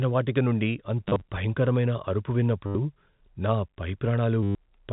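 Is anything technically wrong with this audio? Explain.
Yes. The speech has three bursts of packet loss with the last packet repeated. The first runs from 1.06 to 1.22 s, just before "భయంకరమైన అరుపు". About 80 ms is lost there, in short scattered runs. The second runs from 2.66 to 2.75 s, right after "భయంకరమైన అరుపు". The third runs from 4.43 to 4.55 s, after "నా పై". Each time, missing packets were filled by replaying the previous one. The replays seldom line up with the pitch. The repeats buzz near 100 Hz, which fits 10 ms packets. Each burst sounds like a brief robotic stutter. The G.711 telephone coding caps the sound at 4 kHz, which is normal for that format and not a fault.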